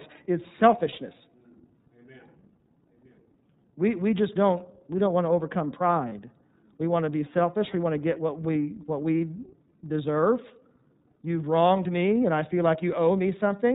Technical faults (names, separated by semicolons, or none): iLBC codec; lost iLBC frames